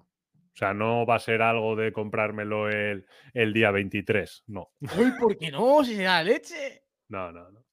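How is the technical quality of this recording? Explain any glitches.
No technical faults can be heard in the recording; the speech signal stays intact and continuous throughout, with no glitches to explain.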